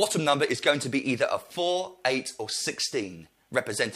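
No technical fault can be heard anywhere in this audio. Nothing in it points to a problem in how it was recorded, processed or passed along.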